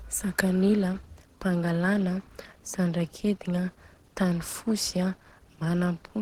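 From start to finish the speech sounds hoarse and somewhat muffled, with a rough, grainy texture laid over it, and the damage is plainly audible. The likely cause is Opus compression at a rate that fits about 16 kbps, running in its hybrid mode. There, a speech coder handles the lower band while the upper bands are rebuilt from coarse energy values, so fine detail becomes noise rather than vanishing, even though content still extends up to about 20.2 kHz.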